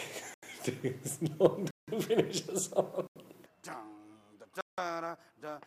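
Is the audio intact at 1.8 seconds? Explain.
No. From 1.71 to 1.88 s a block of digital silence, about 170 ms long, replaces the audio, a length that fits an 8192-sample buffer. Either the program failed to fill the output buffer in time or a calculation produced invalid values. The sound cuts out and returns with no fade, leaving a short hole. Unlike a fade-out or a drop in level, the sound stops outright and returns unchanged, with nothing audible in the gap.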